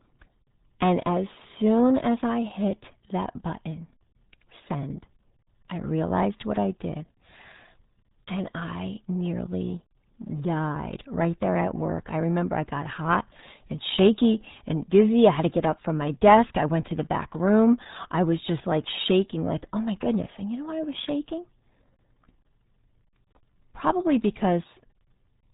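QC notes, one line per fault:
Throughout, RealAudio 14.4 codec. The speech sounds muffled and gargly, with heavy codec damage across the whole clip. Nothing passes above 3.8 kHz, so sibilants and consonant edges are gone. The sound points to a rate of around 8 kbit/s. That fits RealAudio 1, a speech codec built for dial-up modems. It squeezes speech into very few bits by modelling it coarsely. The result is a smeared, watery texture on every syllable.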